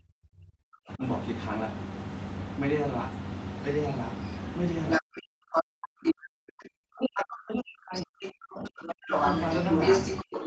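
From 0.00 to 1.03 s the talker's speech sinks sharply, by about 40 dB at its deepest: speech suppressed in double talk, likely because the echo canceller turned down both voices while both sides spoke. A second voice breaks in from 4.89 to 5.20 s, roughly 5 dB louder than the talker. This is the other side's voice leaking through, likely loudspeaker echo the canceller left in the microphone. From 5.00 to 9.14 s the talker again dips by up to about 40 dB in the same double-talk suppression. Brief scraps of the far voice come through at 5.54 to 5.62 s and 6.04 to 6.13 s, and from 7.95 s to the end it leaks through continuously. From 10.23 s to the end the talker is pushed down once more. Throughout, everything is band-limited to 8 kHz by the call path, which fits Opus at about 20 kbps.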